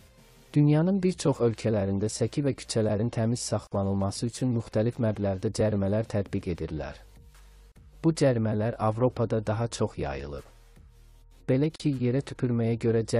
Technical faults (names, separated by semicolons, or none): gap at a join of encoded pieces